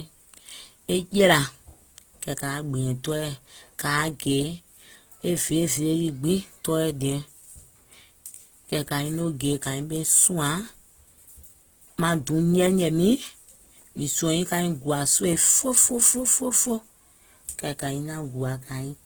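Across the whole speech recording the sound is smeared and watery, pointing to very lean coding. This is likely low-bitrate audio saved at a high bitrate: something like 16 kbit/s Opus re-saved as high-rate MP3. The spectrogram stops cleanly at about 20.1 kHz, yet the detail beneath stays blurred.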